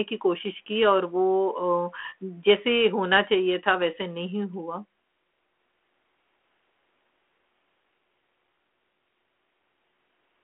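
There are no technical faults in this speech to describe in time order; the G.726 telephone-band coding at 32 kbit/s is working as intended.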